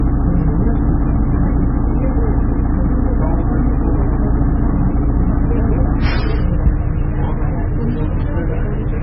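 From start to end the audio is dull and smeared, with nothing above 5.5 kHz. A spectrogram shows a flat ceiling there. It is likely low-bitrate audio saved at a high bitrate: a heavily compressed MP3 re-encoded larger, which cannot restore the discarded detail.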